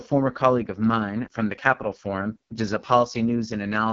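The clip is speech, and it carries the sound of the AMR wideband (HD Voice) codec throughout. The audio has a hard ceiling with nothing above 7.5 kHz, and the top band sounds filled with noise rather than real detail. Heavy coding damage makes the speech rough and raspy, as the pulse-driven vocal tract model struggles to track it. That degree of roughness fits AMR-WB's lowest rate, around 6.6 kbit/s.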